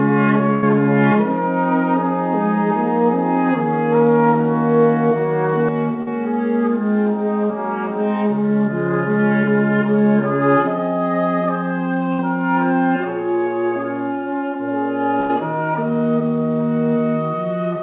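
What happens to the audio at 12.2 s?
Right around 12.2 s there's a short burst of packet loss, running from about 12.13 to 12.21 s. About 60 ms of audio never arrived in time, so the receiver filled the hole by stretching out the last sound it had and fading it down. You hear a brief held, smeared stretch dipping in level, and when the sound picks back up it has jumped ahead, with that 60 ms simply gone.

Underneath that, the channel delay comb filtering that started at 5.69 s is still running through this moment. One channel lags the other by roughly 5 ms, and when the two are folded to mono, whatever they share cancels at evenly spaced frequencies. The first notch sits around 100 Hz and the next ones fall every 200 Hz or so above it. That's why the sound has that hollow, phasey colour, which is still audible in the narrow 4 kHz band of the G.711 call path.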